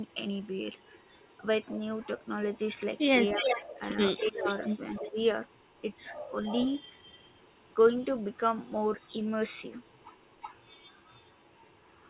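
From 0.08 to 7.75 s an echo leak is audible: a faint copy of the speech trails it by 337 ms at roughly 15 dB down, likely from a loudspeaker echo canceller letting residue through. Between 3.34 and 5.15 s the speech is suppressed in double talk, dipping in pieces by up to around 15 dB for under a second in total, likely as the canceller ducks the near talker along with the echo. Weaker echo leak returns, around 35 dB down, at 9.0 to 9.11 s with a 359 ms delay and from 9.8 s to the end with a 367 ms delay, all of it band-limited to 4 kHz by the G.711 A-law path.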